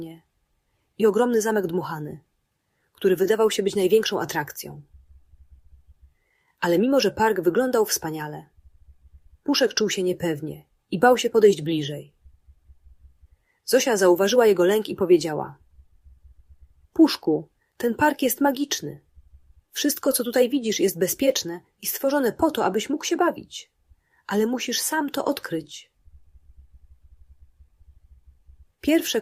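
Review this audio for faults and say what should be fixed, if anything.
No faults found; nothing needs fixing.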